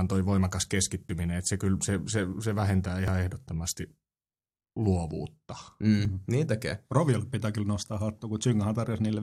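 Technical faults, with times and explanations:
1.09 s, 3.08 s, 6.05 s: overlap between stream segments. Short skips of roughly 8 to 17 ms, after "toi voimakas", after "se se se vähentää", and before "niin tekee". Overlapping segment timestamps make the player discard audio that was never duplicated, so the waveform jumps. The spacing fits 1 s segment boundaries.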